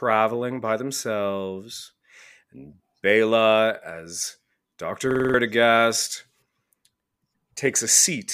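A system hang loop at 5.11 to 5.34 s: with the driver frozen, one 46 ms buffer repeats five times, giving a rattling 21.5 Hz stutter.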